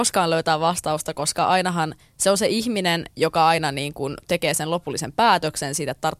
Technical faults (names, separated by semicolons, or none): none